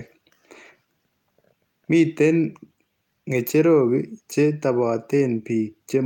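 A speech recording, with nothing technically wrong with it.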